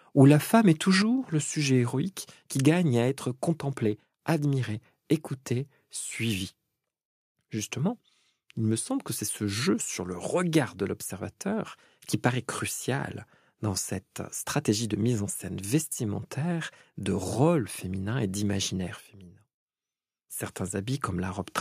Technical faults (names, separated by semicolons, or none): microphone volume stepped down